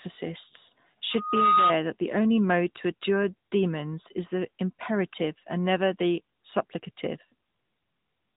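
AMR narrowband mobile codec, throughout the 8 seconds: the speech was squeezed through a low-rate mobile speech coder that models the vocal tract from sparse pulses. Nothing above 3.8 kHz survives, and the plainly audible buzzy, synthetic edge fits a rate near 10 kbps.

Loudspeaker feedback squeal, from 1.11 to 1.76 s: the microphone caught its own loudspeaker and the loop gain passed unity at 1.2 kHz. That single tone swells over a little under half a second, peaking at about 5 dB above the speech, then cuts off.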